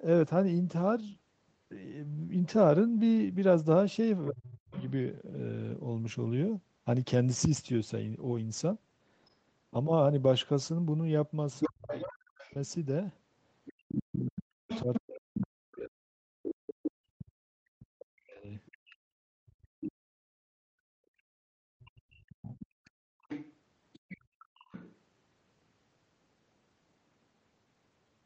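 Around 4.29 to 4.77 s there's speech suppressed in double talk. The talker drops by roughly 40 dB, likely because the echo canceller couldn't separate the two sides and turned both down. The other side's voice leaks through from 4.48 to 4.91 s, about 15 dB under the talker. There's a faint blip of it at 9.3 s, around 40 dB down. From 11.53 to 16.89 s it's nearly as loud as the talker, about 5 dB under. The same double-talk suppression returns from 11.66 to 18.5 s, cutting the talker by roughly 40 dB for around 5 s in total. More leakage follows at 18.66 to 19.92 s (about 10 dB down) and at 21.8 to 24.95 s (about 15 dB down). Between 18.78 and 24.55 s the background is gated by the echo canceller: the room sound dips by about 33 dB for roughly 4 s overall and recovers once the canceller lets go.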